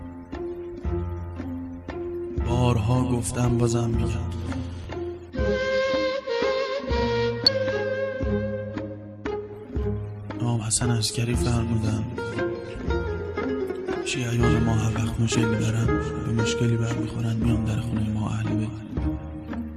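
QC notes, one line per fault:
4.84, 7.47–7.49, 10.86, 15.34 and 17.77 s, damaged data in a compressed stream: corrupted bytes make the decoder misread those frames and lose sync until it finds the next frame header, so each spot gives a brief chirp or blip of 12 to 20 ms.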